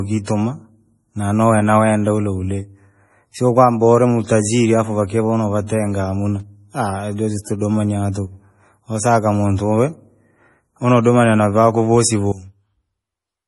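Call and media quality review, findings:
MP3 compression, throughout. Nothing above 11.5 kHz, with watery, swirly texture and metallic chirps on s sounds. Likely MP3 encoding at a low bitrate, consistent with about 32 kbps. The starved encoder cuts treble at a fixed frequency and zeroes weak spectral lines, which switch on and off frame to frame and cause the swirl.

Pre-echo, 5.67 to 5.70 s. Short hiss just before a sharp speech onset, spread over 27 ms, with a softened attack. The transform codec spread quantisation noise sized for the loud attack across the whole block, filling the quiet moment before it.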